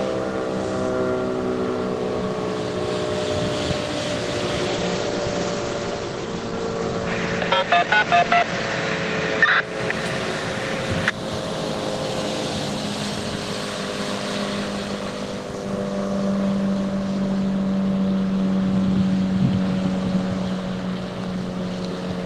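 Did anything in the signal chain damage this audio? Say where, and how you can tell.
Yes. A call bitrate drop hit the codec stage from 4.69 s to 9.69 s. The encoder's rate fell from 32 kbps to 14 kbps and stayed at its lowest for about four seconds. At that rate Opus codes coarsely and narrows its bandwidth from 20 kHz to 8 kHz. The audio loses its top end and turns muffled, with a rough, watery texture, then regains its brightness as the rate recovers.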